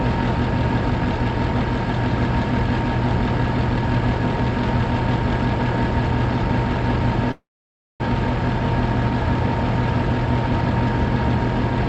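A call audio freeze runs from 7.31 to 8.01 s. The sound trails off into a brief fading fill, then about 0.57 s of silence, likely because delayed packets left the jitter buffer empty. Playback resumes where it stopped, with nothing lost but everything afterwards about 0.68 s late.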